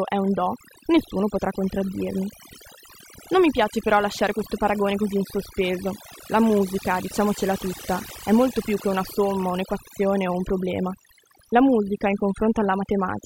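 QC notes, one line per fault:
Throughout, overdone noise removal: the denoiser was pushed too hard, so any frequency band sitting near its noise estimate gets pulled right down, taking the quieter bits of speech with it. That leaves a near-silent background with twinkly specks.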